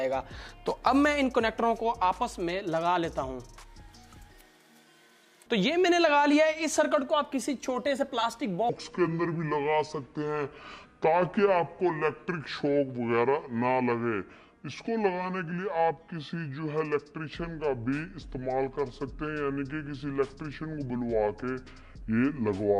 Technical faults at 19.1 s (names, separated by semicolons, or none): section at the wrong speed